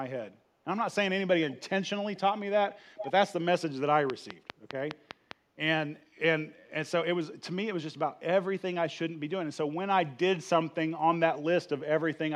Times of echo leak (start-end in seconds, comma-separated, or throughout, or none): 1.49-1.62, 2.15-2.20, 2.98-3.11